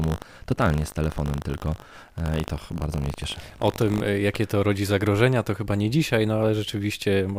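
From 0.0 to 4.02 s the speech carries buffer tearing: a steady 50 Hz robotic rattle, present only while sound is playing. Writer and reader of the ring buffer have slipped, so each 20 ms period includes a small slice, around three percent, of audio roughly 70 ms stale, hard-spliced on both sides.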